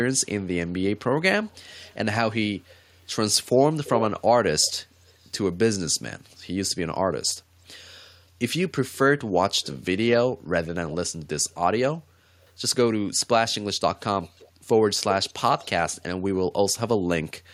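A loudspeaker on the far end is likely letting its output back into the microphone, and the echo canceller is not removing all of it, so an echo leak returns the speech about 0.34 s late, drifting slowly toward 0.35 s. Delayed scraps appear at 1.47–1.95, 2.70–2.76, 3.84–4.03, 4.62–5.29, 9.62–9.77, 11.50–11.96, 14.23–14.48 and 15.29–15.90 s. Most sit far below the speech. The one at 3.84 s is much louder, a clear second copy only somewhat quieter than the original.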